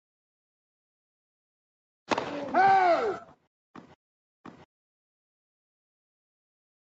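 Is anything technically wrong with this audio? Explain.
Yes. From 3.2 to 3.47 s, the noise suppressor mistakes sound for noise and cuts it by up to about 19 dB, so that stretch briefly sinks in level.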